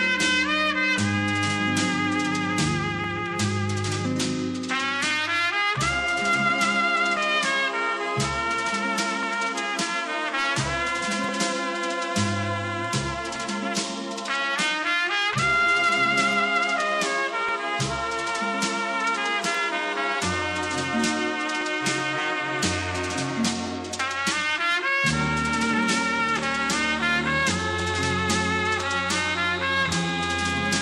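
From 0.98 s to 29.86 s a click recurs every 2.06 s, about fifteen in all, likely clock drift buffer slips: a clock mismatch of around 300 ppm forces a few dozen samples to be dropped or repeated. The strict regularity distinguishes it from random dropouts.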